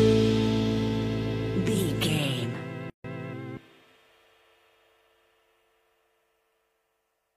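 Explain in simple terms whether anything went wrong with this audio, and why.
Yes, one thing went wrong. At about 2.90 s the sound suddenly drops out for roughly 0.14 s, a brief hole, and then picks up at 3.04 s exactly where it left off, as if nothing was skipped. This is a gap at a join of encoded pieces. The audio was compressed in separate chunks and then stuck together. Each chunk carries a little built-in silence at its edges, and nobody trimmed it away before joining.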